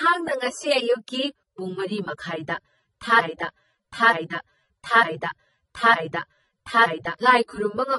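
From the start, the speech sounds smeared and watery, with two different kinds of codec grit layered on each other and nothing above 11.3 kHz. This is likely transcoding between lossy codecs, consistent with a low-bitrate AAC pass followed by MP3, the second encoder spending bits on the first one's artefacts.

From 3.20 s to 7.19 s, a 0.91 s fragment repeats exactly, back to back, four times, and the speech that should have played in that span is lost. This broken-record loop likely comes from a stalled player, encoder or stream that kept resending the last fragment it held.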